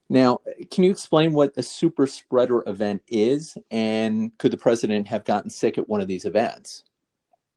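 This speech clip is in good shape, with nothing going wrong technically anywhere in it.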